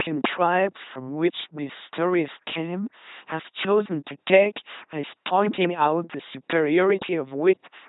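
A speech clip passed through an LPC-10 vocoder for its whole length, with heavy damage. The voice has become a buzzing, mechanical robot sound: each moment is rebuilt from a simple tract filter driven by either a pulse train or noise, so voicing switches abruptly, and misjudged segments turn into stray buzz or hiss. Nothing is present above 3.9 kHz, and the coarse rendering fits a 2.4 kbit/s stream.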